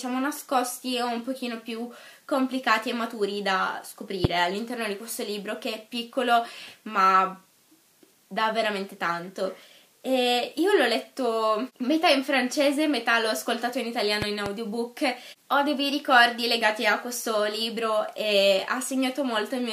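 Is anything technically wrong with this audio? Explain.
Yes, there are loud pops. A sudden voltage step, likely from a switch, plug or static discharge, entered the signal path. This put a single sharp pop around 20 dB above the audio at 4.25 to 4.27 s, and a quieter double pop at 14.22 to 14.49 s, with the sound continuing underneath both.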